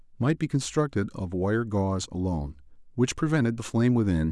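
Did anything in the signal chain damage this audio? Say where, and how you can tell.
No, nothing in the signal chain damaged this audio.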